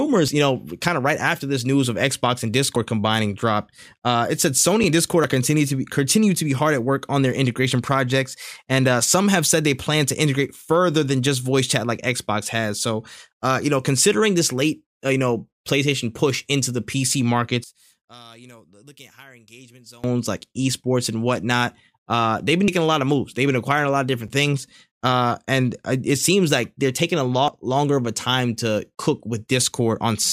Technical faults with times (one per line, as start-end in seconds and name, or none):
2.76 dropped buffer (overrun)
5.24 dropped buffer (overrun)
17.64-20.04 one channel inverted
22.68 dropped buffer (overrun)
27.48 dropped buffer (overrun)